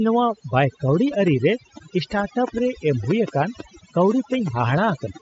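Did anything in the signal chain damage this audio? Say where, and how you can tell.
Yes. Overdone noise removal at the call-processing stage runs throughout: near-silent background with twinkling specks. Unlike codec band dropouts, bands vanish wherever they approach the noise floor.

A train of clicks runs from 1.08 to 5.18 s, roughly twenty similar pulses at about 4.7 per second, irregularly spaced, about 15 dB above the speech, even in pauses. This is likely interference or a struggling interface rather than isolated buffer dropouts.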